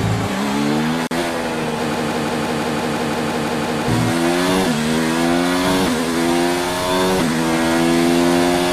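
At 1.07 s there's a 40 ms gap at a join of encoded pieces, running to 1.11 s. Two separately encoded chunks were stuck together untrimmed, so the encoder's start-up delay and end padding left a hole of silence with smeared edges before the sound picks up where it stopped.

From 1.94 s to 3.88 s you get a broken-record loop: a 170 ms fragment plays back to back 11 times. That's likely a stall in the player, encoder or stream re-sending the last chunk it held, and whatever should have played there is simply gone.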